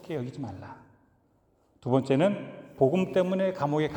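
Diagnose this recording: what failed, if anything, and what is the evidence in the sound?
Nothing failed here as far as I can hear: the audio runs without a dropout, glitch or distortion anywhere, so there's no stage to point at.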